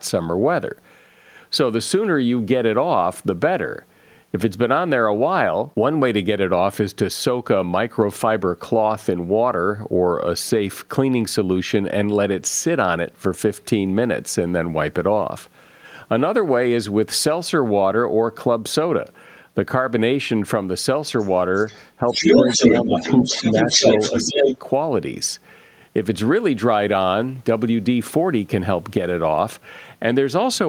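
A speech recording in which, from 21.19 to 21.3 s and again from 21.55 to 21.85 s, the other side's voice leaks through faintly, some 25 to 30 dB below the talker. From 22.11 to 24.57 s it leaks through in a sustained stretch, louder than the talker by around 5 dB. The likely cause is a loudspeaker on the talker's device whose echo the canceller failed to remove. Unlike room reverberation, this leak is a separate second voice rather than a smeared copy of the talker. While that second voice plays, the talker's speech is suppressed in double talk. It dips by roughly 5 dB at 22.0 to 22.27 s, 22.83 to 23.08 s and 23.28 to 23.88 s, and by roughly 10 dB at 24.11 to 24.5 s. The echo canceller likely turned down both signals when both sides spoke at once. Unlike packet-loss dropouts, these dips are partial and occur while the far side is playing.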